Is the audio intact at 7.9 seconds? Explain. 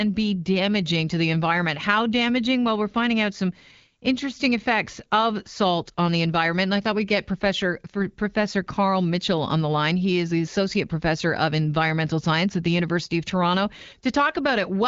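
Yes, the audio is intact at 7.9 s, with nothing there beyond the ordinary character of the AMR wideband (HD Voice) coding that carries the whole clip.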